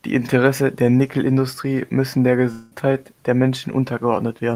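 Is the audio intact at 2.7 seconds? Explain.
No. At 2.7 seconds the speech is still inside a gap running from about 2.51 to 2.73 s that sounds like a long network dropout. About 200 ms of audio is missing, and the receiver papers over almost all of it by extending the last sound as a fading buzzy tail, with no stretch of outright silence. The likely cause is a run of lost packets. Speech resumes at 2.73 s, and the missing portion is never recovered.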